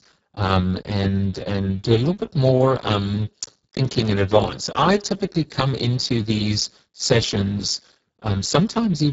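Speex codec damage runs through the whole clip. The speech sounds hoarse, noisy and edging toward robotic, which fits a very low Speex setting near 6 kbps that leaves too few bits for the excitation signal. Nothing is present above 7.7 kHz.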